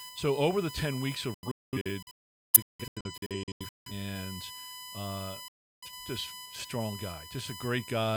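A steady USB whine runs under the speech from start to finish: current drawn in 1 ms bus frames leaks into the audio through power or ground, producing a fixed 1 kHz tone whose harmonic at 3 kHz is loudest, roughly 10 dB below the speech. On a spectrogram it shows as unbroken horizontal lines at 1 kHz and its multiples.

From 1.34 to 3.91 s a digital broadcast dropout mutes the audio whenever received frames fail. The gaps are scattered, totalling about 1.49 s of silence, with the longest about 0.43 s. Each cut fades in about 3 ms, and the hole sizes fit frames of roughly 43 ms. A second dropout silences 5.48 to 5.88 s. The waveform drops to near silence in blocks, and the spectrogram shows matching blank vertical bands.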